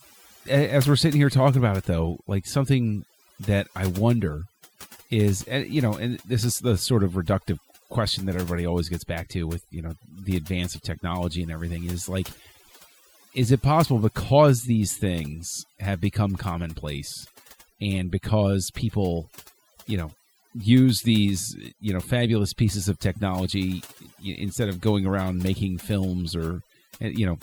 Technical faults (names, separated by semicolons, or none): overdone noise removal